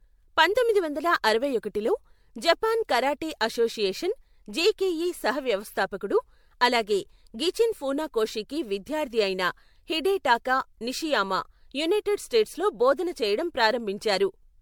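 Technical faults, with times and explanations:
Throughout, generation loss: the speech sounds swirly, hollow and smeared, with blurred attacks and nothing above 19.9 kHz, which fits an MP3 chain near 96 kbit/s likely re-encoded around seven times, each pass quantising on a shifted frame grid so noise and spectral holes accumulate.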